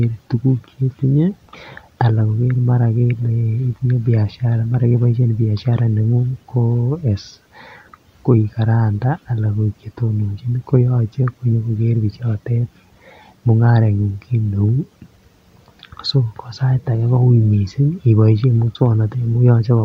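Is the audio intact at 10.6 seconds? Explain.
Yes, at 10.6 seconds the speech is intact, with no dropout, click, distortion or other audible fault.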